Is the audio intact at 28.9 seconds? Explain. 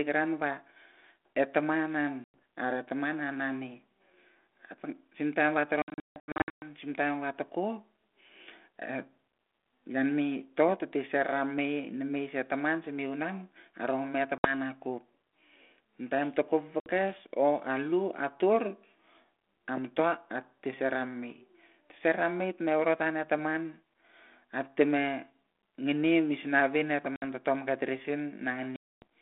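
No. Packet loss on an ADPCM call cuts the audio from 28.76 to 29.02 s, just after "ta tomke tiri sin". A hard-edged 260 ms silence replaces lost packets, throwing the decoder's predictor out of step.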